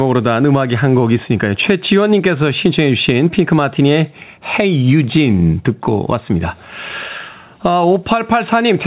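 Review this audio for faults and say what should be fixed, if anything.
Gain pumping runs through the whole recording. The gain swings by around 10 dB, pulling down each time the speech gets loud. Loud and quiet syllables sit unnaturally close in level, so the speech sounds squashed. The likely cause is input gain set far too high, with a fast limiter or compressor dragging it down on every peak. The narrowband call path cuts everything above 4 kHz. To prevent the pumping, lower the microphone gain and ease off the fast limiting.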